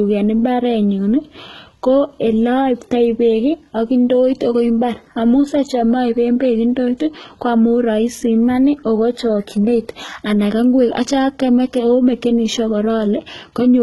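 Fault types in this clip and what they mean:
HE-AAC compression: throughout the speech, s sounds are gritty and metallic and the treble stops dead at about 11.8 kHz. This likely comes from HE-AAC rebuilding the upper band from copied lower bands, and the heavy damage fits a bitrate near 16 kbps.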